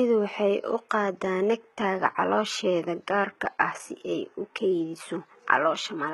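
Right from the start and all the way through, the speech carries heavy HE-AAC compression damage, likely from a very low bitrate around 16 kbps. The treble is rebuilt from copied lower bands, so s sounds turn gritty and metallic, and nothing reaches above 18.3 kHz.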